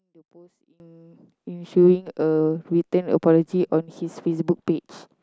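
From 0.0 to 0.8 s the speech drops by about 32 dB when heard in mono, leaving only a faint residue. The likely cause is one channel inverted: with one stereo side's polarity reversed, the shared centre content cancels on summing.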